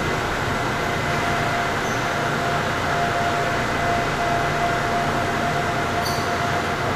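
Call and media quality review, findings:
Vorbis compression, throughout the clip. Grainy, hissy treble. Roughened tones and smeared attacks. Nothing above 14.2 kHz. Likely cause: a low-quality Vorbis encode, with damage consistent with about 35 kbps. Treble residue is quantised so coarsely that fine detail turns into noise of similar energy. The encoder also lowers the band limit.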